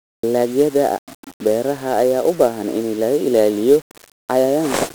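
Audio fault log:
Throughout: 1-bit DFPWM compression. The speech sounds fuzzy and crackly with treble sunk in hiss, because each sample's single bit only nudges an adaptive level up or down.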